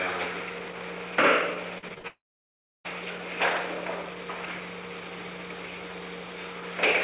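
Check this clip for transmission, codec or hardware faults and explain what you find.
Two transmission faults follow each other in the first three seconds, passed through a G.711 A-law call path whose band stops at 4 kHz.

From 1.78 to 2.06 s, repeated packet loss (robotic sound) leaves four gaps, the longest 53 ms, each patched by repeating prior audio. It sounds choppy, with smeared, repeated blocks on a spectrogram.

From 2.08 to 2.86 s, audio likely stopped arriving in a long network dropout. A brief fading buzz gives way to about 0.67 s of flat silence in the waveform.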